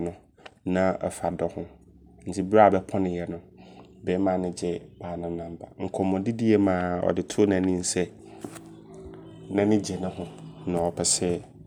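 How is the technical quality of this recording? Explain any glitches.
Nothing in the recording stood out as a technical problem on listening, so there are no glitches to explain.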